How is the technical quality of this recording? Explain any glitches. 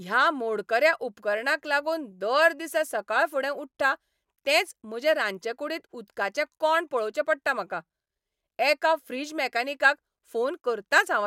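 No technical faults are audible anywhere in the recording, so there are no glitches to explain.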